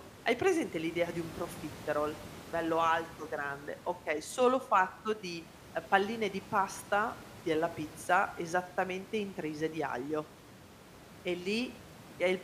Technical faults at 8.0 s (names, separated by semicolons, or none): none